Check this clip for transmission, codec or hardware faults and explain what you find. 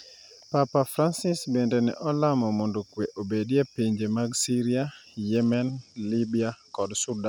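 One fault is present: a Bluetooth SBC bit pool drop from 5.35 s to the end of the clip. The encoder sharply reduced its bit allocation, which fits a fall from a bit pool of 28 to 12, near 96 kbps. The upper sub-bands are starved, so the treble dulls, and coarser quantisation leaves a gritty noise over the speech.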